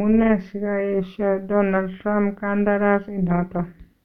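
From start to finish, the speech carries overlap-add ripple. The audio was split into windowed frames and rejoined, but the overlapping windows did not add up to a steady gain. So the level swells and dips once per frame, by about 6 dB. The ripple repeats at around 200 times a second. At that rate it is not heard as a slow pulse. It sounds like a metallic buzz, with extra tones around each sound of the speech.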